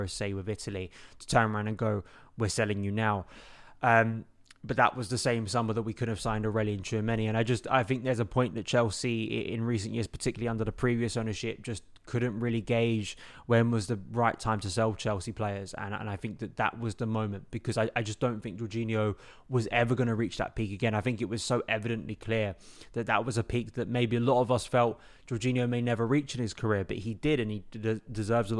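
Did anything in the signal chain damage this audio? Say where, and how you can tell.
No, nothing in the signal chain audibly damaged this speech recording at any stage from capture to playback.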